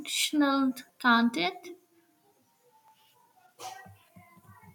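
Audio missing between chunks is heard at 0.89 s and again at 2.88 s in this short speech recording. At each point a sliver of sound, about 10 ms, simply vanishes and the audio on either side butts together with no gap, giving a tiny skip. The two skips fall 2.0 s apart, which likely comes from a recorder or processor working in 2-second blocks and dropping a few milliseconds each time it hands over to the next block.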